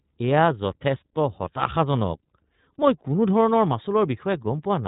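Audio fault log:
throughout iLBC codec: speech sounds rough, synthetic and muffled, with nothing above 3.8 kHz, from independently coded 30 ms frames, consistent with about 13 kbps.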